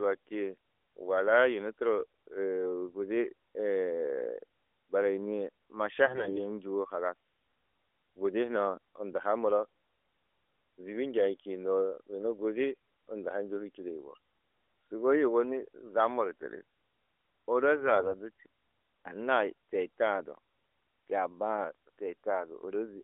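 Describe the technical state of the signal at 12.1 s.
At 12.1 s the signal is intact, with no fault at that moment, and the narrowband character of the AMR mobile codec path is simply part of how the line sounds there.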